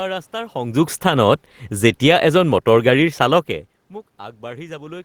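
From 0.91 s to 3.5 s the automatic gain is falling: the gain control judged the input too loud or its background noise too strong and backed its gain off gradually, by about 5 dB over that span. The level sags steadily rather than stepping, and the room noise sinks right along with the voice, which is how it differs from the talker moving, heard around 0.5 s and 3.5 s, where only the voice changes.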